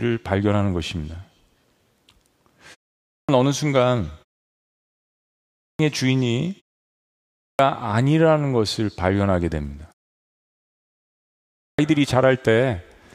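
At 3.04, 5.54, 7.33 and 11.54 s, speech returns with a clipped start after a pause. The output device sleeps through each silence and must wake again. Roughly 0.25 s is swallowed each time. Words burst in abruptly, missing their first sounds.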